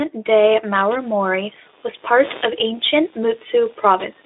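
From 0.74 s to the end at 4.26 s, computer activity noise rides under the speech: a buzzy chirping at around 150 pulses per second, roughly 25 dB below the speech, from load changes disturbing the shared audio ground. A spectrogram shows evenly spaced vertical ticks below the 3.8 kHz Speex band edge.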